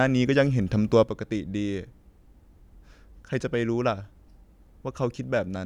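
At 1.04 s the speech drops abruptly by about 6 dB and stays down to the end, likely one channel dropping out before the mono sum, a clean step rather than a fade.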